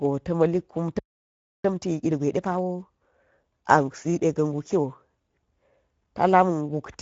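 A speech recording carrying Speex codec damage from start to finish: the coder has too few bits for the excitation signal, and the result is a plainly audible hoarse, noisy grain on the voice, consistent with a setting around 16.8 kbps, with nothing above 7.7 kHz and only a thin, noise-like fill in the upper band. At 0.99 s a playback stall, most likely the player running out of data or its thread being blocked, cuts the sound off mid-flow, leaving about 0.66 s of silence before it resumes at 1.64 s. From 1.64 s to 4.26 s a time-compressed catch-up follows, as the player works through its backlog by removing small pieces and cross-fading across the gaps, so the speech runs about 1.25 times faster at unchanged pitch.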